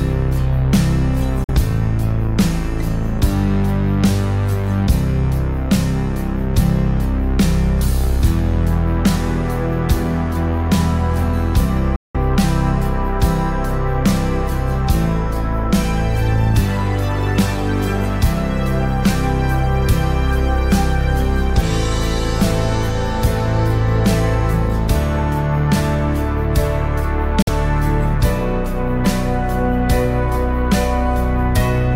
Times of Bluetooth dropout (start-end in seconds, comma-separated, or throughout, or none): 1.44-1.50, 11.96-12.16, 27.42-27.49